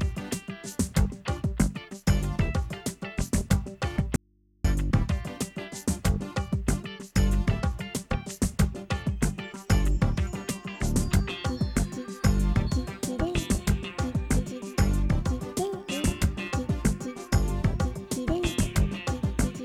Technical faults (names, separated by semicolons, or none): audio dropout to a faint residue